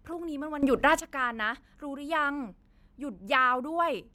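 A sudden gain jump from 0.63 to 1.0 s lifts speech and background noise together by about 13 dB, likely from a gain setting applied instantly without any ramp.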